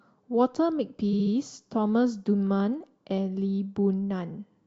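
From 1.12 to 1.33 s the speech stutters: a short slice of sound, about 70 ms long, plays over again three extra times before the audio moves on, giving a quick mechanical jitter. These are repeated frames. A stretch of the compressed stream was written or delivered more than once, so the decoder faithfully played the same block again on each copy. The clip runs about 209 ms longer than it should as a result.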